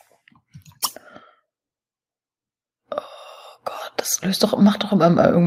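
Nothing in the audio stood out as a problem on listening.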